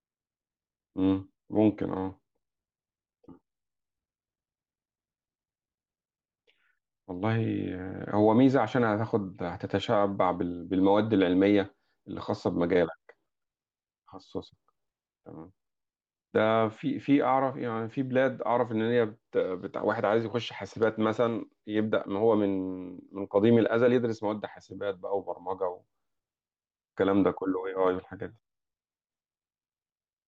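Listening through the speech, nothing stood out as a technical problem at any point.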